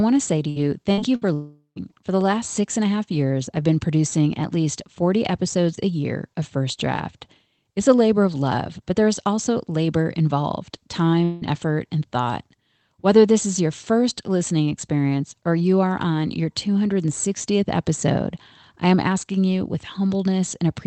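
Speech carried over a call link shows a burst of packet loss three times early on, at 0.49, 0.91 and 1.16 s. Each gap lasts about 90 ms. The receiver stretches the last sound for about 60 ms and turns it down, so it becomes a short buzz or hiss. The speech then resumes with about 60 ms skipped. Two longer breaks follow, at 1.33 to 1.79 s and 11.24 to 11.44 s. These are likely long network dropouts. In the first, the fading fill runs about 0.42 s and ends in about 0.11 s of silence before the sound returns. In the second, the fill covers about 0.17 s with no silence, and the lost stretch is simply gone.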